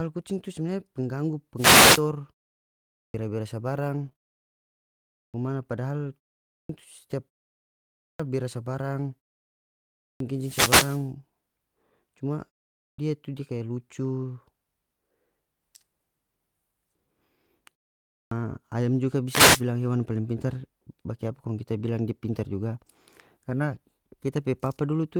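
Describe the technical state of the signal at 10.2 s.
Clipped start after a pause, 9.98–10.20 s: the sleeping output wakes late, swallowing 223 ms of speech onset. The waveform leaps abruptly from flat to full level.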